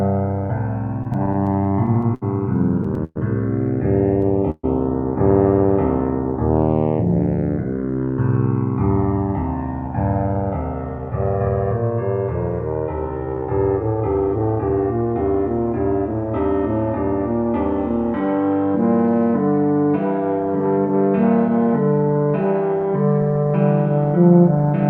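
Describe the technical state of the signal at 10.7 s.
At 10.7 s the sound is inside a jitter buffer speed-up running from 9.03 to 11.98 s. The receiver trims short pitch-period pieces repeatedly, playing at 103% speed with unchanged pitch. About a tenth of a second is removed. The channels are also drifting apart throughout. Their clocks differ by a few hundred parts per million, reaching around 5 ms offset, which gives slow flanging in mono.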